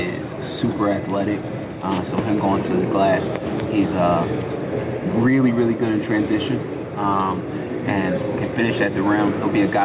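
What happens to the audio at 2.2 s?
At 2.2 s you're hearing gain pumping, which runs through the whole clip: the level swings by around 5 dB, pulled down under each loud sound. The likely cause is the input gain set too high, with a fast limiter hauling it back down on every peak.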